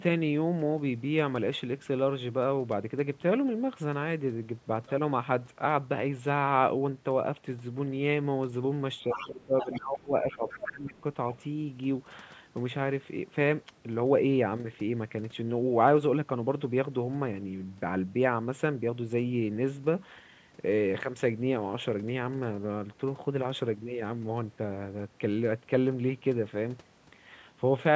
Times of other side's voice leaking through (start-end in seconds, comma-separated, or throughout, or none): 9.10-9.32, 9.59-9.81, 10.31-10.72, 10.97-11.02, 11.32-11.36